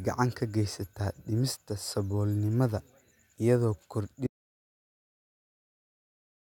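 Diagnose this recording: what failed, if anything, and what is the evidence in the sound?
Audio dropout to silence at 4.27 s: the speech stops mid-flow and silence runs to the end, with no room tone. The waveform flattens and the spectrogram goes blank. The likely cause is lost input upstream, while the recorder kept writing zeros.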